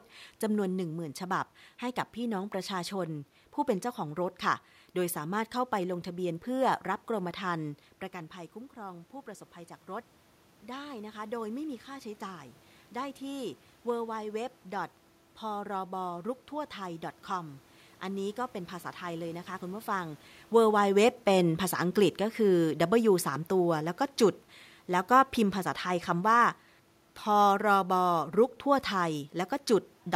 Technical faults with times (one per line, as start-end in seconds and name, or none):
20.52-28.25 automatic gain falling